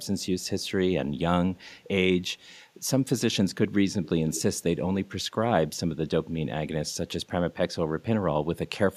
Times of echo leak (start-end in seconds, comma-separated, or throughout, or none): 0.03-0.71, 1.56-1.83, 2.48-2.55, 4.04-4.09, 4.34-4.42